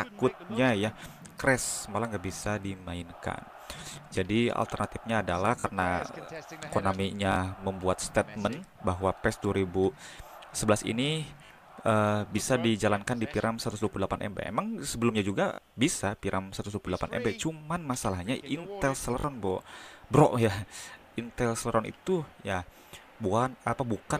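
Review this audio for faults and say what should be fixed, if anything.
Five short stutters, each with a hard join, occur at 5.60–5.64 s, 7.32–7.36 s, 11.46–11.50 s, 15.54–15.58 s and 19.20–19.24 s. Each is a repeated buffer: new audio did not reach the output in time, so the same 20 ms slice, pointing to a 20 ms buffer, played two extra times before the stream resumed. Around 40 ms of the real sound is lost each time. To prevent it, give the playback path more buffer headroom or feed it at a steadier rate so it never runs dry.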